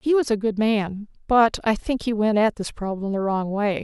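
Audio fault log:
No technical faults can be heard anywhere in the recording; the signal holds steady throughout.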